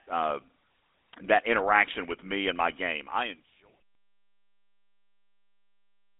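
A speech recording that sounds buzzy and gravelly throughout, confined to roughly 300 Hz to 3.7 kHz, which fits GSM full-rate codec coding at about 13 kbps. It fades out smoothly from around 2.5 s to 3.81 s.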